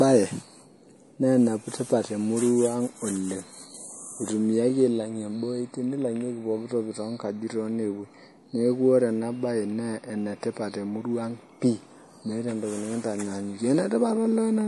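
An MP3 encoder likely ran short of bits, which fits a rate near 48 kbps, cutting everything above 11.5 kHz and leaving the speech watery, swirling and smeared throughout.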